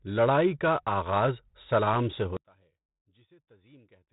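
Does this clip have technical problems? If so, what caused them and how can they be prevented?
Yes. The speech was encoded as 4-bit ADPCM, consistent with a heavily compressed 32 kbps stream. Gritty hiss rides every loud syllable, attacks distort, and nothing remains above 3.8 kHz. Using a higher bit depth or a modern codec prevents this.

From 2.37 s to the end, one channel was likely inverted. The mono sum cancels, dropping the speech by about 32 dB to a faint residue. Checking channel polarity before summing to mono prevents this.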